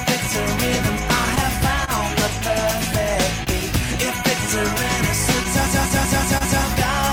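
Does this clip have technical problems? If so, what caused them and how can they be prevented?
Yes, there are three kinds of fault.

Clock drift between sender and receiver runs through the whole clip. The sender's clock is about 2 percent slow, so the jitter buffer keeps draining and the receiver patches it with small repeats, giving uneven little timing hiccups. Adaptive resampling on the receiver, steering against the buffer level, would absorb that.

There's a short stall from a late packet at 1.85–1.91 s, 3.44–3.50 s and 6.38–6.44 s. Each time the buffer ran dry, and the last sound was held for about 30 ms before carrying on, with nothing lost. A slightly deeper or adaptive jitter buffer would cover these.

A system hang loop runs from 5.67 to 6.63 s. A 186 ms chunk, which fits an 8192-sample buffer, repeats five times at about 5.4 per second, giving a machine-gun stutter. The 6.38 s stall falls inside it. 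Fixing the driver freeze, or muting output on a watchdog timeout, prevents this.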